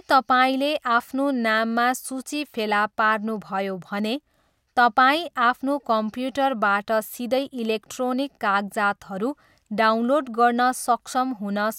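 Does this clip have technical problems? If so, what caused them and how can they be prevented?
No, no technical problems detected.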